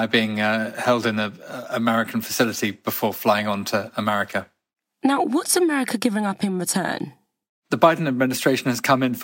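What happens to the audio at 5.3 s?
Nothing goes wrong at 5.3 s; the speech there is intact, with no dropout, click, distortion or other audible fault at that moment.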